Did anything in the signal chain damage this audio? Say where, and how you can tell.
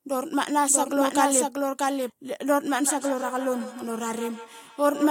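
Yes. A doubled audio track, likely from a second, slower capture path or an edit holding two copies, puts an abrupt full-band copy about 5 dB quieter and roughly 0.7 s behind from 0.70 to 2.10 s.

A feedback echo between two devices in call processing, where one device replays what another's microphone sent, brings speech back at roughly 150 ms intervals from 2.78 s to the end, peaking about 13 dB below the speech.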